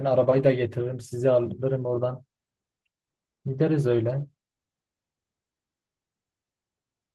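Nothing's gone wrong with this bit of speech; it came over an ordinary call link, and the top end rolling off around 12 kHz is just how that Opus connection normally sounds.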